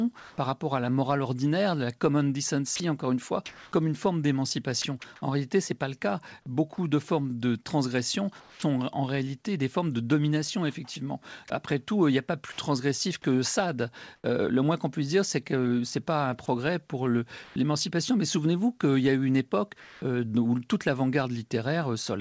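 Comfort noise in place of the background appears first at 0.20 to 0.38 s. For 180 ms the real room tone, sitting about 32 dB below the loud parts, gives way to a smooth, featureless hiss about 2 dB louder, likely because the sender's silence detection stopped transmitting and the receiver synthesised noise to fill the gap.

Sound chopped by the voice detector runs from 2.76 to 8.62 s, between "morale ordinaire la common" and "en réalité des formes". The detector likely toggled on and off several times, and about 560 ms in total was replaced by generated noise. Quiet syllables and word edges vanish.

Sound dropped by the voice detector occurs at 10.94 s, where a 20 ms sliver of speech is mistaken for background and likely withheld, so steady noise briefly stands in for it.

At 14.16 to 14.24 s comfort noise in place of the background returns for 80 ms. Against a background about 41 dB below the peaks, the fill is about 8 dB quieter, so the room seems to drop away. 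Inside that window, at 14.22 s, an onset is clipped by the voice detector: the first 20 ms of the returning speech is likely lost because the detector reacted late, and the sound starts abruptly without its soft attack.

At 16.46 s, just after "que c'est pas un", another drop by the voice detector replaces 20 ms and removes about 10 ms of actual speech. It opens a comfort-noise stretch lasting to 17.56 s, during which 140 ms of background is swapped for flat synthetic noise, likely from the same discontinuous transmission.

The last comfort-noise substitution, at 19.80 to 20.02 s, falls between "a eu une époque" and "euh où toute". For 220 ms the background, about 27 dB below loud passages, becomes uniform noise about 1 dB quieter, likely the receiver filling a transmission pause.

Throughout, nothing reaches above 8 kHz, which fits the wideband G.722 codec on the call path.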